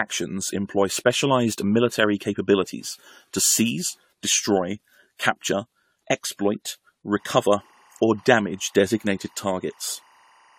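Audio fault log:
throughout, generation loss: the speech sounds swirly, smeared and hollow, with blurred attacks and nothing above 19 kHz. It is more damage than one encode explains. This is likely repeated lossy re-encoding, around five passes, pointing to AAC-LC at 64 kbit/s, each requantising on a shifted frame grid.
7.11–10.58 s, timecode bleed: right after "seize destroy capture exploit", a faint chirping warble sits well below the speech, flipping between roughly 1 kHz and 2 kHz. Linear timecode at 24 frames per second, a square-wave signal, is leaking in from a neighbouring track or cable.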